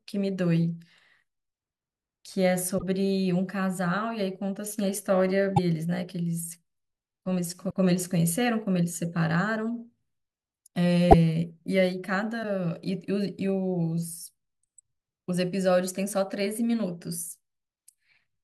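Five short disruptions break the speech at 2.77 to 2.83 s, 5.56 to 5.59 s, 7.69 to 7.73 s, 11.10 to 11.14 s and 12.42 to 12.45 s. Each lasts one or two 24 ms frames. At each one the speech jumps ahead and the first moment after the cut comes out mangled. The likely cause is a broken MP3 bit reservoir: frames were cut out, and the next frame, reaching back for data it had stored in earlier frames, decoded bytes from the wrong frame. A plain dropout would leave a silent gap, but here the speech skips forward and the restart is garbled.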